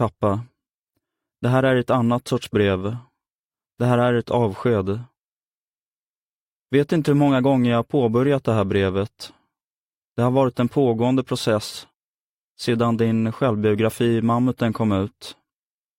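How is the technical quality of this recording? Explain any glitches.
No glitches or faults audible.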